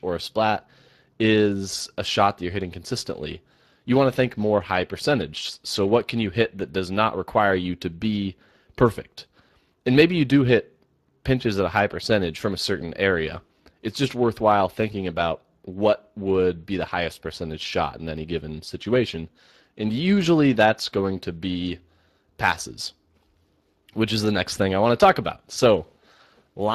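Throughout, the speech carries Speex codec damage. Its low-bitrate predictive coding leaves plainly audible artefacts, which fits a rate near 22 kbps. Nothing sounds above 15.3 kHz.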